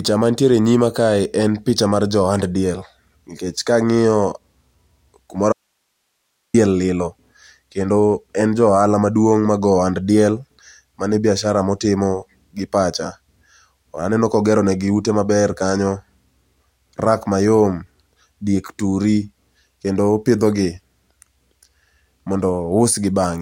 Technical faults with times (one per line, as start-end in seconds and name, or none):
5.53-6.54 audio dropout to a faint residue